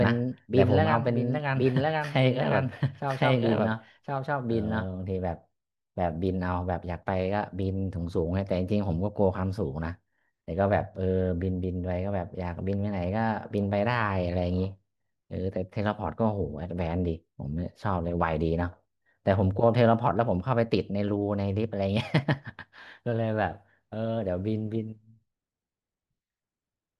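From the very start of the clip until 4.86 s, the speech is heard twice over: a second, full-band copy trails the first by about a second, at roughly equal loudness, dry, with no decay, and it stops abruptly at 4.86 s. This is a doubled audio track, likely caused by the same signal being captured again through a slower path, or by an edit holding two unaligned copies, so both play together.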